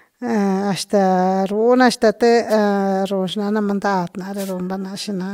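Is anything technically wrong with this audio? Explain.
Yes. Wireless microphone noise hits at 2.49–2.54 s and 4.36–4.54 s: the FM radio signal fades through reflection cancellation, letting receiver noise burst through as brief static swishes over the speech.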